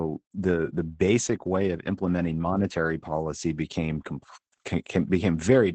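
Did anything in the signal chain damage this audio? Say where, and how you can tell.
Yes, at the codec stage, and it's there for the whole clip: Opus voice compression. The top of the band is gone, with nothing above about 8.8 kHz, and the speech comes across a bit muffled, hoarse and faintly robotic. That points to Opus running its SILK linear-prediction coder in wideband mode, at a bitrate somewhere around 12 kbps. At that rate it models the voice through a predictor and codes the excitation coarsely, so the grit is plainly audible.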